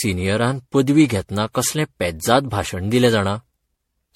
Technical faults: generation loss

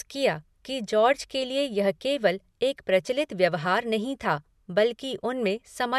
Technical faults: none

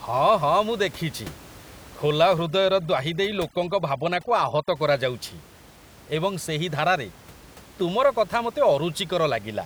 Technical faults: overdone noise removal

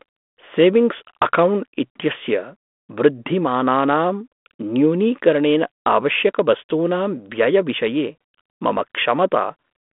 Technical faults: none

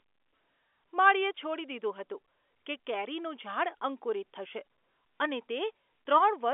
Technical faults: none

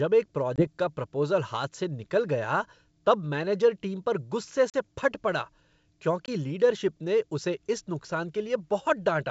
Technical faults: packet loss on an ADPCM call

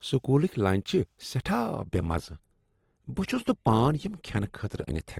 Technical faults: adaptive stream at a lower bitrate

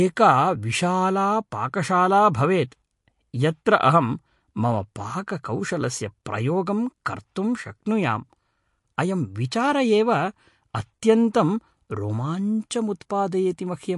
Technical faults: MP3 compression; pre-echo

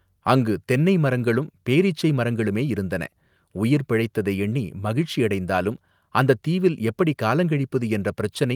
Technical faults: none

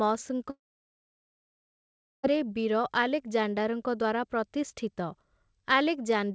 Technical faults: long network dropout

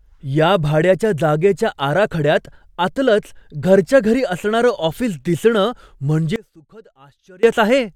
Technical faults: one channel inverted

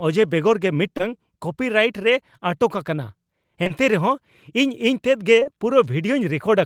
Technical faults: short concealed packet loss

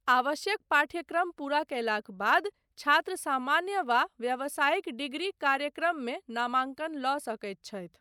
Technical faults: none

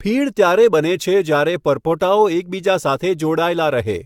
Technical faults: generation loss

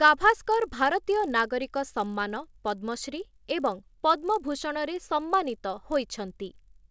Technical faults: resampler restarted on every block

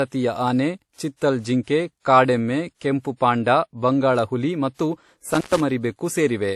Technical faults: transcoding between lossy codecs; intermittent contact

